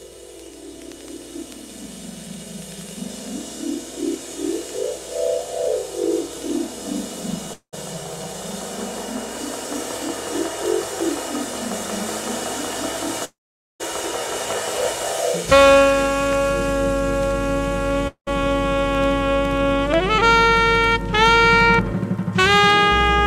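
At 7.53, 13.25 and 18.08 s, the sound decays into a fading buzz or hiss, then silence. The gaps last 0.21, 0.57 and 0.34 s. This is likely a long network dropout.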